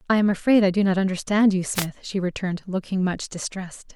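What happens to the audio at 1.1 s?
Nothing goes wrong at 1.1 s: the speech there plays through intact, with no dropout, click, glitch or other fault at that moment.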